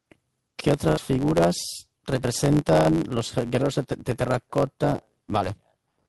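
From the very start there's a block size mismatch, truncated type. One stage is handing over longer blocks than the next one reads, so the tail of every block gets dropped. That chops the speech about 92 times a second, which you hear as a steady buzz riding under everything. The whole clip also runs about 1.07 times too fast while the pitch stays roughly where it should be. The buzz rate fits a 512-sample block being cut short.

Then there are two bursts of packet loss. The first runs from about 0.89 to 0.99 s. The receiver papers over roughly 81 ms by stretching out the last bit of sound and letting it fade, which gives a brief held, dying tail. When the speech comes back, about 80 ms of it is simply gone. The second burst, from about 2.79 to 2.87 s, does the same thing on a smaller scale, with around 61 ms filled in and 60 ms missing.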